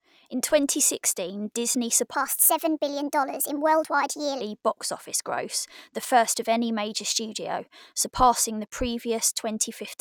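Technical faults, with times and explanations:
2.15 to 4.41 s, section at the wrong speed: the speech plays 1.32 times fast and rises about five semitones, likely from playback fitted to the wrong clock.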